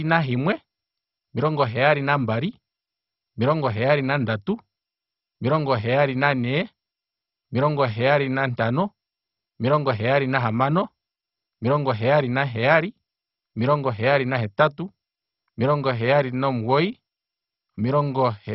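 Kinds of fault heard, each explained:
MP2 compression: dull, band-limited speech with nothing above about 5.6 kHz and heavy gurgling granularity, likely from MPEG Layer II coding starved of bits, fitting roughly 32 kbps.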